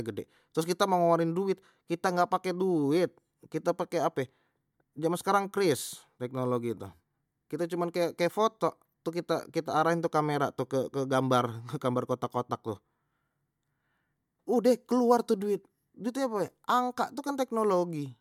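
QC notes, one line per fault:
No faults heard in this clip.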